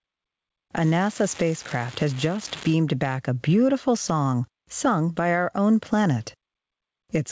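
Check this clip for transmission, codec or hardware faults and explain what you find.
Two faults are audible: gain pumping across the whole clip, and a burst of bit-error crackle early on. The call path's band limit at 8 kHz, consistent with G.722, is not itself a fault.

Gain pumping runs throughout. The likely cause is input gain set far too high, with a fast limiter or compressor clamping down on each loud sound. The gain swings by around 15 dB, leaving the sound squashed and uneven.

An unreliable data bit appears from 0.80 to 2.73 s. A marginal data line flips one bit in a random fraction of samples, so each error becomes a spike of identical size. Across that span this is heard as a steady crackle or fizz that persists through quieter moments too.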